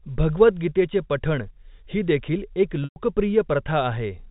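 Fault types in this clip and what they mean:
Packet loss with pitch repetition: 120 ms went missing; a repeated pitch period fills it, showing as frozen harmonics that fade to a blank gap, then cross-fade back.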